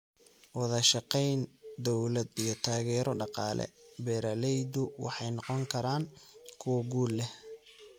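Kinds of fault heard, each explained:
No technical faults can be heard anywhere in the speech recording.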